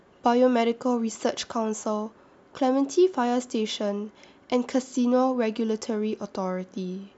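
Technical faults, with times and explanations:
No technical faults can be heard in this speech clip.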